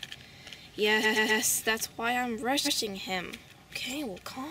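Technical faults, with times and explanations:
1.02–1.41 s and 2.64–2.77 s, repeated frames: the audio stutters as a 128 ms piece plays again, three extra times in the first run and once in the second. Stored or sent frames were duplicated, adding 384 ms and 128 ms respectively.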